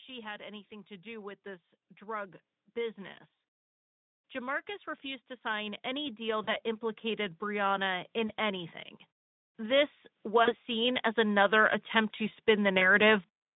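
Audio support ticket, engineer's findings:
Automatic gain rising: level and background swell together, 0.06–3.27 s (about 6 dB), 4.32–8.75 s (about 8 dB), 9.56–13.23 s (about 7 dB). The AGC ramps gain up on quiet input. On the waveform, the envelope widens steadily, and the noise floor lifts with it.

VoIP packet loss concealed by the speech codec: brief fading smears at 6.43, 8.27, 10.44, 12.79 s. The decoder extrapolates lost 20–40 ms chunks, fitting one or two frames. On the spectrogram, these show as smeared bands that fade, with weak recovery afterward. The Speex codec's 150–3700 Hz band is visible throughout.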